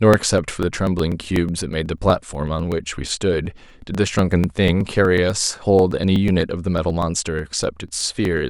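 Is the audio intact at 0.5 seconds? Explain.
No. At 0.5 s the audio sits inside a run of periodic USB or driver dropouts that lasts from 0.14 s to 8.38 s. Something keeps blocking the USB bus or the audio driver every 0.123 s. Each time, a couple of milliseconds of speech is skipped outright, not padded with silence. The splice leaves a small discontinuity in the waveform. So the speech carries a steady train of ticks, about eight per second, heard only while sound is present.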